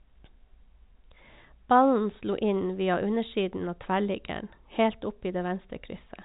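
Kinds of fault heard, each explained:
No faults detected in the speech; the 4 kHz top end and faint level-tracking noise floor are what the telephone-band coding path it rides on, consistent with G.711 mu-law, normally leaves.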